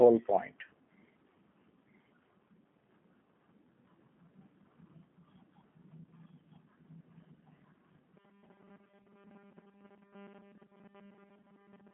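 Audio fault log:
Throughout: doubled audio track. A second, full-band copy of the speech trails the original by about a second, at roughly the same level, so every phrase lands twice with no decay or room colour on the echo. That dry, equally loud repeat doesn't sound like a room. Most likely the same signal got picked up a second time by a slower path, or an edit left two copies sitting out of step.
Throughout: G.729 codec. The whole clip has come through an 8 kbit/s G.729A speech codec, and the damage is plainly audible. The band is narrow, roughly 200 Hz to 3.5 kHz, with nothing above about 3.8 kHz, so it sounds boxy and telephone-like. The codec rebuilds each frame from a vocal tract model and a handful of pulses, which gives the speech that rough, slightly synthetic grain.
8.17 to 11.93 s: robotic sound from repeated short buffers. For the last few seconds the speech collapses into a rigid, metallic buzz pitched at 200 Hz that only loosely tracks the speech. 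A repeat rate like that points to a tiny slice of about 5 ms being looped. The likely cause is audio arriving too seldom, with the playback side filling gaps by replaying that slice, so around 70% of what you hear is repeats rather than real audio.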